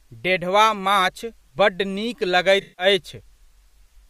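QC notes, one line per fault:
2.61–2.85 s: AAC frame loss with concealment. About 171 ms of coded audio is missing, which fits a run of roughly eight lost frames. The decoder bridges the gap by reusing the last good spectrum with scrambled phase, so the speech turns smeared and noisy before clean decoding resumes.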